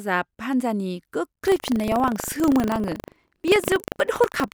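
Speech clip with buffer tearing from 1.44 s to the end: the writer and reader of the playback ring buffer have drifted into each other, so every 40 ms period carries a small slice of audio roughly 150 ms old, heard as a steady 25 Hz robotic rattle over the speech.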